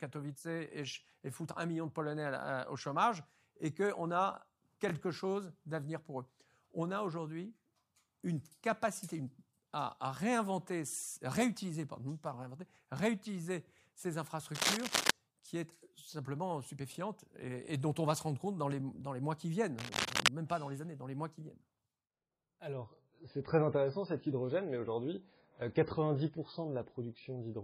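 From 14.54 to 15.11 s, a burst of scratching noise rides over the speech. A second burst runs from 19.79 to 20.28 s. Both are dense and uneven, like rustling grit, and sit a little louder than the speech itself. This is cable scratch noise. The likely cause is a worn cable or connector being moved. Its contact resistance jumps about rapidly, and those jumps come through as crackle.

At 22.73 s the quality drops suddenly, with no gap, and stays low to the end. Nothing remains above 5 kHz, so the speech turns dull and muffled. Codec artefacts rise, giving a smeared, watery edge. This is an adaptive stream at a lower bitrate. The player switched to a cheaper version when the connection slowed. The loss fits a move from about 128 kbit/s MP3 down to about 16 kbit/s.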